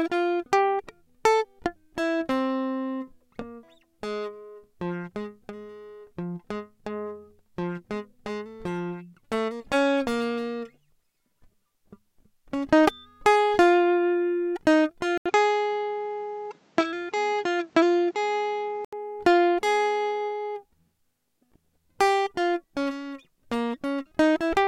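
A music clip in which, from 15.18 to 18.93 s, the sound suddenly loses everything above 8.1 kHz and turns dull, with a faint new hiss sitting well below the music, before clearing again. An 80 ms silence marks the change, and the loudness stays about the same. The likely cause is an input switched to a poorer device, since the gap and the change in noise floor separate it from a simple low-pass filter or codec bandwidth drop.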